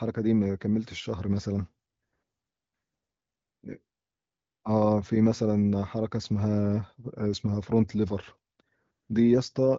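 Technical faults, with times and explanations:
No technical faults can be heard in this speech clip. The speech carries nothing above about 7.5 kHz, which fits the AMR wideband (HD Voice) codec at a rate high enough, around 18 kbit/s, to keep it clear.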